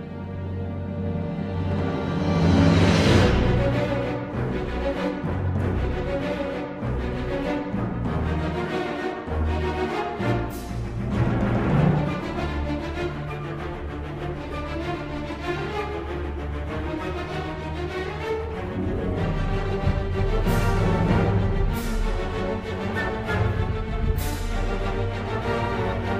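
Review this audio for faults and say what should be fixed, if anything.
There are no faults to report in this audio, so nothing needs to be fixed.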